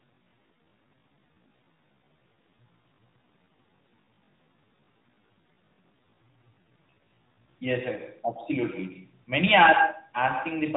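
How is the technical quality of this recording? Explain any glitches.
The recording has two clear faults: an echo trailing the speech throughout, and a slowed opening section. Both sit on top of a mobile-call band limit, with nothing above about 4 kHz.

Echo with no canceller runs the whole clip. The far end's loudspeaker output is being picked up by its microphone and sent back with nothing removing it. Every phrase is shadowed roughly a tenth of a second later by a copy about 9 dB quieter, which sounds thin.

A time-stretched section covers 0 to 7.52 s. That stretch plays at about 0.62 times normal pace while the pitch holds steady, which points to software likely lengthening the audio by repeating short fragments. The result is a dragging delivery.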